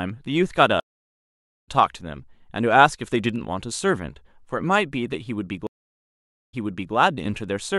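Stream reconnect at 0.80 to 1.69 s: 0.87 s silence, then resumes about half a second later. Again at 5.67 to 6.95 s: 0.86 s gap, resuming 0.42 s earlier, repeating audio.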